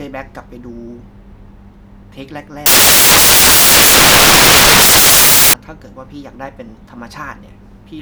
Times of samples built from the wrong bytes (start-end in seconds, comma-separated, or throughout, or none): 2.66-5.53